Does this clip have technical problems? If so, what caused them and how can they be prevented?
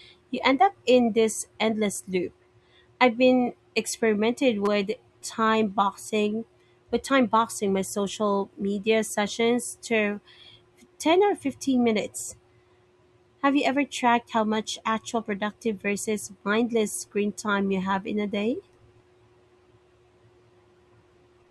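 Yes. A repeated buffer occurs from 4.66 to 4.68 s. New audio arrived late, so the device replayed the same 5 ms block four extra times. The hard joins every 5 ms make a brief 200 Hz buzz, and almost no audio is lost. Raising buffer size or playback-thread priority keeps data arriving before each buffer runs out.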